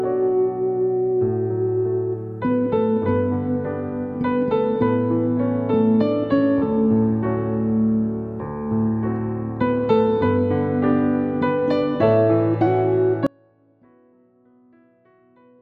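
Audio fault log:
13.27 s to the end, audio dropout to a faint residue: the sound cuts out abruptly and never returns, leaving only a faint trace of the signal, roughly 30 dB below its normal level, for the final 2.3 s. The likely cause is a break in the wanted signal while the path after the break stayed live and passed a small leak. The sudden step, with no decay, sets it apart from a fade or a natural pause.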